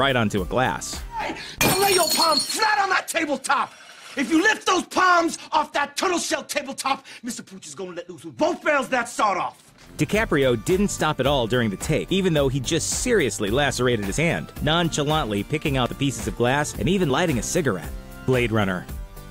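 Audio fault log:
14.18, 14.96, 15.86, 17.1 and 18.28 s: dropped buffer (overrun). The sound jumps ahead, losing about 20 ms each time, nearer 70 ms at 18.28 s. The likely cause is samples overwritten before being read. The waveform shows an abrupt seam with no gap, and the spectrogram a thin broadband vertical line.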